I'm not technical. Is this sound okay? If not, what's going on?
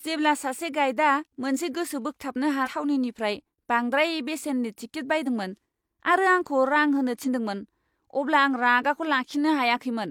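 No. The speech has compressed frames skipped at 2.62, 5.23 and 7.23 s. Small chunks of audio never play, so the speech suddenly jumps forward. At 2.62 s roughly four 43 ms pieces vanish, and one at each later point. Unlike a dropout, there's no silent gap, just a jump ahead.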